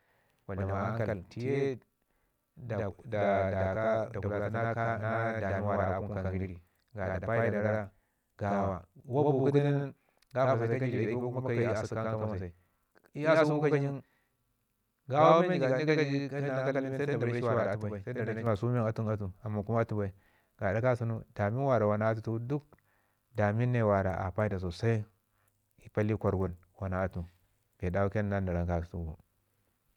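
A speech recording carries a channel delay (doubling) from the start to 18.47 s: one channel runs about 85 ms late, a gap that fits a 4096-sample buffer at 48 kHz, and the two are summed to mono, so every syllable gets an equal-level slap echo. On a waveform each transient appears twice, 85 ms apart. A spectrogram shows doubled onsets and smeared consonant edges, and both vanish after 18.47 s.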